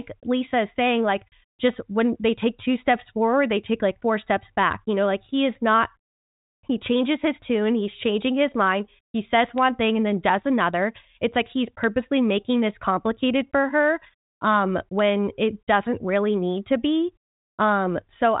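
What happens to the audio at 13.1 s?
At 13.1 s the audio is intact: the G.726 ADPCM path at 40 kbit/s carries it normally, with the band ending near 3.8 kHz and no fault at that point.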